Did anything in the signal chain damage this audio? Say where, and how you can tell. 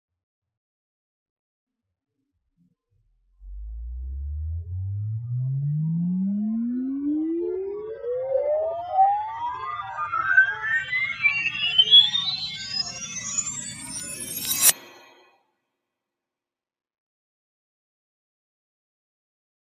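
Yes. At call processing, sound was cut by the noise suppressor from 15.22 to 15.81 s. Level sinks by up to about 22 dB. The suppressor mistook it for noise.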